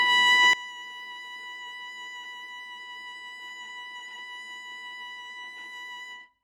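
Right at 0.53 s the music falls in level by about 19 dB and stays down for the rest of the clip, with everything, including the background, dropping at once. That's a sudden gain jump, and the likely cause is a digital gain change applied from one sample to the next with no ramp, such as a setting or bit shift switched in mid-stream. So there's no fade at all, just an instant step to a much quieter level.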